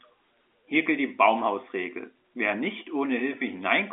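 Nothing stood out on listening to this speech clip, which carries the narrow band of an ordinary telephone line.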